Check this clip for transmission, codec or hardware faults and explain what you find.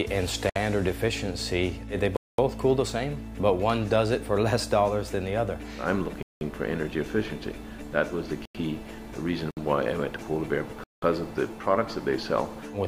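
Six blocks of digital silence break up the clip: at 0.50–0.56 s (62 ms), 2.17–2.38 s (219 ms), 6.23–6.41 s (186 ms), 8.45–8.55 s (93 ms), 9.51–9.57 s (60 ms) and 10.84–11.02 s (186 ms). Samples were zeroed, probably because the output buffer wasn't filled in time. The 186 ms gaps fit an 8192-sample buffer and the 93 ms gap a 4096-sample one. Each gap cuts hard to dead silence and back. Unlike concealed packet loss, nothing fills the hole.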